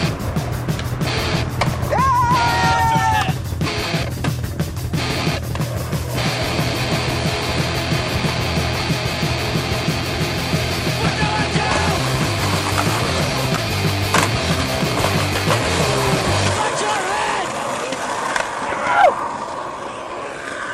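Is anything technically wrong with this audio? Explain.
Yes, there is a case of damaged data in a compressed stream from 16.21 to 16.25 s. A short stretch of the encoded stream has been corrupted, so the decoder can't read those frames correctly, loses its place and has to hunt for the next valid frame header before decoding resumes. That breakdown surfaces as a brief burst of about 40 ms, a sharp chirp or blip that cuts abruptly across the sound before normal playback returns.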